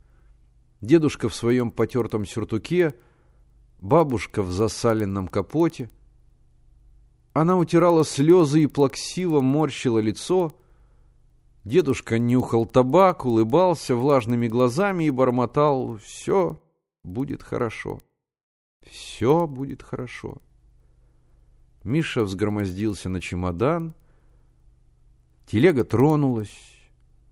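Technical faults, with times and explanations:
Throughout, resampler restarted on every block: the rate conversion, which fits 24 kHz up to 48 kHz, ran on each 100 ms block in isolation and missed the neighbouring samples at the seams, so a small tick marks every block edge, 10 per second, only while speech sounds.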